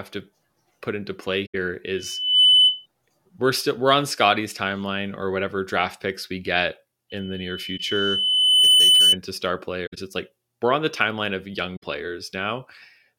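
At 1.46 to 1.55 s the speech is hit by a corrupt frame concealed. The length points to about four damaged AAC frames. The decoder detected them and covered the gap itself.

From 1.95 to 2.86 s a loudspeaker feedback squeal appears. A single 3 kHz tone swells over about half a second, reaching roughly 10 dB above the speech. The microphone is picking up its own loudspeaker, and the loop gain exceeds one there.

From 7.10 to 9.18 s the same 3 kHz squeal returns. This time it builds more slowly, over about one and a half seconds.

Inside it, at 7.77 to 7.80 s, there is one more concealed frame.

Concealed frames recur at 9.86 to 9.98 s, which fits about five frames, and at 11.76 to 11.83 s, which fits about three.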